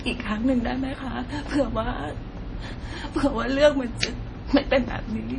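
Likely MP3 compression runs throughout the speech, with heavy damage that fits a bitrate around 32 kbps. The encoder removes everything above 10.4 kHz and drops weak frequency lines frame by frame, so the sound turns dull, watery and swirly, with smeared attacks.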